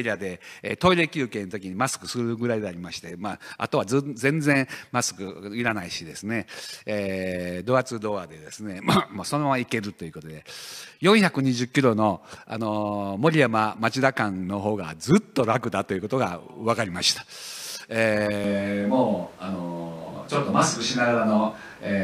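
At 18.44 s the recording likely stops using the close microphone and switches to a distant microphone for the rest of the clip. The speech turns abruptly roomy and hollow, with less bass, at about the same level, and room noise sits about 25 dB below the speech.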